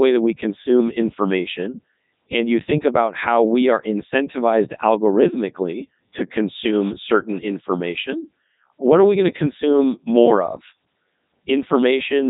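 From start to finish the speech has passed through a Codec 2 vocoder with heavy damage, and the result sounds robotic and buzzy. The decoder rebuilds the voice from sine waves driven only by pitch, voicing, energy and a coarse spectral envelope, so the original waveform is gone. On a spectrogram the harmonics look unnaturally regular, and nothing appears above 3.8 kHz, which fits Codec 2's highest 3.2 kbit/s mode. The waveform no longer resembles the original.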